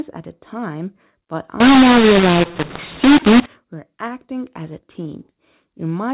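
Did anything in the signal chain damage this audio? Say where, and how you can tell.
Yes. From 1.60 s to 3.46 s the speech turns harsh and gritty, and the pauses inside that span fill with hiss instead of dropping to silence. This is a mu-law and A-law mix-up at the codec decode stage. The telephone-band audio, limited to about 4 kHz as an 8 kHz G.711 mu-law stream would be, was expanded with the A-law curve for that stretch. The mismatched companding tables map codes to the wrong amplitudes, which distorts peaks and pushes near-silent samples well above the floor.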